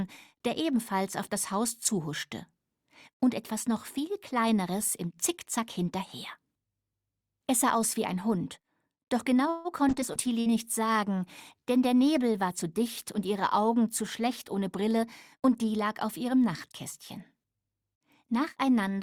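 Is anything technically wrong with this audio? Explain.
Yes, there are several call-transport faults, concentrated between about 9.5 and 15.8 seconds.

At 9.49 to 9.68 s there is a call audio freeze. Packets were likely held up in transit, so the jitter buffer ran dry and the receiver extended the last sound for about 153 ms as a fading buzz or hiss. The audio then resumes exactly where it stopped, so nothing is lost, but a pause has been inserted.

From 9.94 to 14.89 s there is a call bitrate drop. The bandwidth estimate fell and the encoder went from 64 kbps to 28 kbps for nearly 5 seconds. The coarser coding makes the sound rougher and watery until the rate comes back.

At 10.01 to 10.04 s there is a skip ahead. Audio was discarded while later packets were already queued, so playback jumps forward with only a tiny fill of about 7 ms. Roughly 70 ms of material is gone, and the two sides butt together almost directly.

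At 10.13 to 10.19 s there is a short concealed packet loss. About 60 ms never reached the decoder in time. The receiver bridged the gap with 21 ms of extrapolated sound and then blended back, which leaves a brief smear or wobble.

From 10.26 to 11.62 s there is a jitter buffer slow-down. Running low on reserve, the receiver repeated single pitch periods and fragments of pauses, adding 106 ms. Playback runs at about 93% speed with unchanged pitch, so sounds are drawn out.

At 10.40 to 10.49 s, within that slowed stretch, there is a burst of packet loss. Consecutive packets failed to arrive, so 60 ms of material is missing. The receiver filled 51 ms by continuing the last sound and fading it, heard as a held, decaying buzz or hiss before the audio picks up further on.

From 14.01 to 15.76 s there is a jitter buffer speed-up. With too much audio queued, the receiver trimmed short pitch-period pieces repeatedly, removing roughly 150 ms. 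The sound plays at about 107% speed at the same pitch and comes across as hurried.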